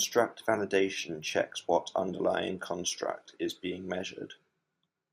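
No technical faults are audible anywhere in this recording.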